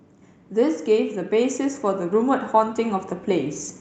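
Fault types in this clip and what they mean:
Automatic gain rising: The gain control judged the speech too quiet. It raised the level by about 6 dB, from 0.53 to 3.62 s, swelling voice and background together.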